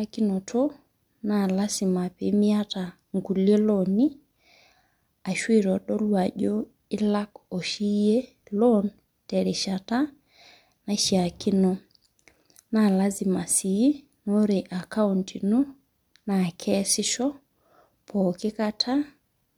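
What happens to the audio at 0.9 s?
Nothing goes wrong at 0.9 s: the speech continues there intact, with no dropout, click or other fault.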